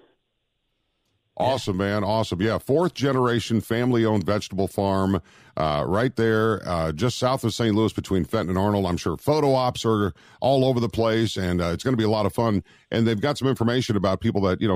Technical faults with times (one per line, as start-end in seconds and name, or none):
none